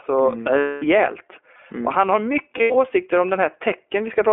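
The iLBC codec affects the whole speech clip. Everything above 3.4 kHz and below 300 Hz is gone, and the independently coded excitation, which fits 20 ms frames at 15.2 kbps, sounds plainly rough and synthetic. Lost iLBC frames appear from 0.58 to 0.84 s, where about 240 ms is replaced by a repeated pitch cycle with added noise, heard as a held, buzzy vowel. They recur from 2.58 to 2.75 s, just after "han har", where 120 ms of scattered losses, none much longer than a tenth of a second, leave brief breathy stutters that recover almost at once.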